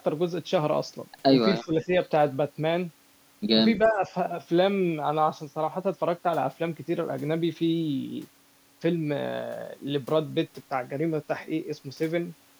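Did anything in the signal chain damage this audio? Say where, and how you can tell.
Yes. The speech dips at 1.64–1.91 s, by about 15 dB, and again at 3.85–4.12 s, by about 10 dB, each time for roughly a fifth of a second. This is call processing: speech suppressed in double talk, likely an echo canceller attenuating the near talker while the far side also spoke.

Also in call processing, an echo leak appears at 3.77–3.88 s: a faint delayed copy of the speech, about 30 dB below it, lagging by 326 ms. It is likely loudspeaker pickup that the far-end echo canceller failed to fully remove and sent back down the line.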